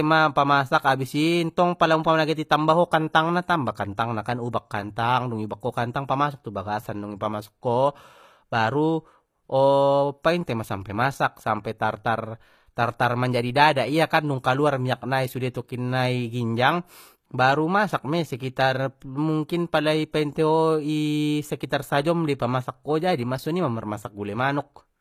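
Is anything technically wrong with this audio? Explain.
Yes. Throughout the speech there is HE-AAC compression damage, plainly audible and likely from a low-bitrate encode around 24 kbps. The treble up to the 14.9 kHz ceiling is rebuilt from copied lower bands, so sibilants sound gritty and metallic. Unlike a simple low-pass, brightness remains but is synthetic.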